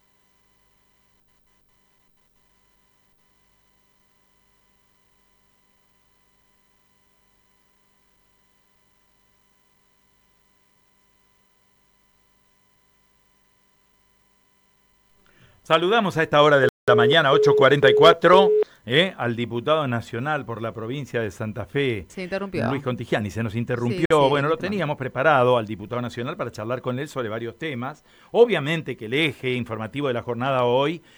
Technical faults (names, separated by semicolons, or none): Bluetooth stall